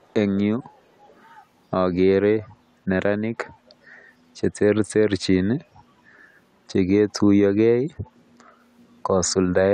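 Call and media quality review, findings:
Echo leak at 0.01–0.13, 0.77–0.81, 1.07–1.24, 2.40–2.48, 3.97–4.04, 5.74–5.80 and 8.04–8.10 s: faint copy of the speech 449 ms late, some 30–40 dB down. Likely far-end echo canceller residue. A discrete delayed repeat, not smooth reverb decay.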